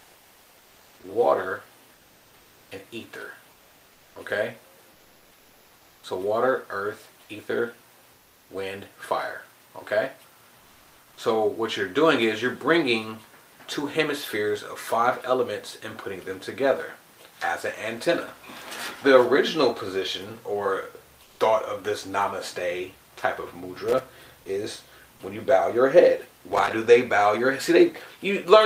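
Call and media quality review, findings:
Comfort noise in place of the background, 4.91–6.03 s, 8.13–8.49 s, 10.59–11.17 s, 21.23–21.39 s: pauses swap real ambience for flat, detail-free hiss, up to about 3 dB quieter; likely codec discontinuous transmission. A noise gate would leave silence instead.

Loose connector crackle, 23.88–24.06 s and 26.48–26.73 s: irregular scratchy bursts from an intermittent contact chopping the signal. Uneven texture, unlike regular clicks from digital dropouts.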